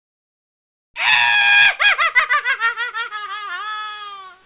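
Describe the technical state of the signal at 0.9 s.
At 0.9 s the real background has been replaced by comfort noise, from the start of the clip to 0.94 s. It is a steady, featureless hiss, about 31 dB quieter than the true background, with none of its detail. The likely cause is discontinuous transmission. The sender stopped sending audio during this stretch, and the receiver filled the gap with synthetic noise shaped roughly like the background. Like the rest of the call audio, it holds nothing above 4 kHz.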